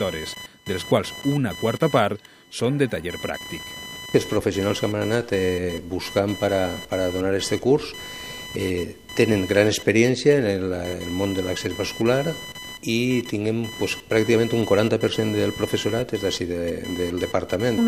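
Computer activity noise runs through the whole clip: a buzzy, chirping pulse train repeating at roughly 1 kHz, sitting roughly 15 dB below the sound. Shifting processor or peripheral load disturbs the shared ground of the audio circuit, so the buzz follows the computer's activity rather than the sound itself.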